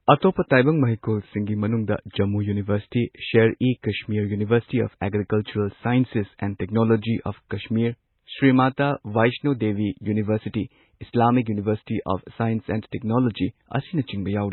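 Low-bitrate audio saved at a high bitrate runs through the whole speech clip. The sound carries the coarse, smeared character of very heavily compressed MP3, which fits an earlier pass at around 16 kbit/s, yet the later 192 kbit/s MP3 encode adds almost nothing. The likely cause is a low-bitrate file re-encoded at a higher rate. The larger file cannot bring back what the first encode discarded, so its damage stays audible.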